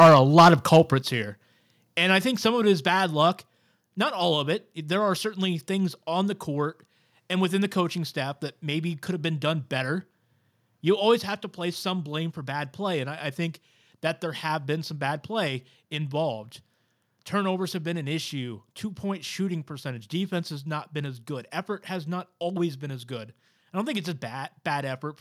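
Speech opens with microphone overload from 0.0 to 0.77 s: peaks are flattened at the converter's limit, with around one sample in twenty clipped and the level pushing about 7 dB past the limit, giving a harsh crackle, likely from input gain set too high for the converter. The waveform shows squared-off tops, and the spectrogram shows broadband smearing on each loud syllable. Microphone volume stepped down twice: a small drop of about 2 dB at 0.03 s, then a larger one of about 8 dB at 1.02 s, both likely the call software cutting device gain, and appearing as abrupt step changes in the waveform envelope and sudden dimming across every band of the spectrogram.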